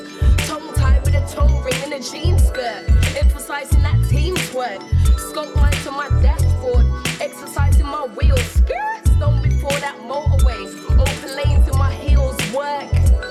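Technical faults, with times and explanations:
Nothing here stands out as a technical fault; it all comes across just fine to the ear.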